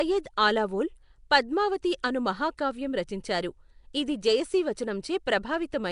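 From start to finish the speech carries a rough, hissy halo and a smeared, underwater feel, and nothing comes through above about 10.6 kHz. That's the sound of Nellymoser compression, likely from Flash's old Nellymoser Asao mic codec, with the damage plainly audible. It codes short blocks at a fixed two bits a sample, which fits a rate around 44 kbps, and the bands it starves are swapped for noise, hence that fizzy, blurred texture.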